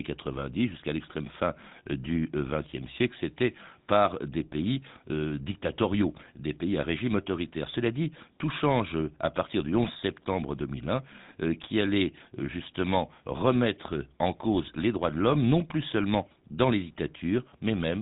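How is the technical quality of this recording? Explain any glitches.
The recording is limited by plainly audible codec damage that runs through the whole clip. GSM full-rate codec artefacts are present from start to finish: the speech has a buzzy, gravelly roughness, consistent with a 13 kbps full-rate coder rebuilding the voice from a vocal-tract model driven by sparse, regularly spaced excitation pulses. On a spectrogram, energy stops sharply at about 3.8 kHz, with nothing above it, and the harmonics look smeared and grainy.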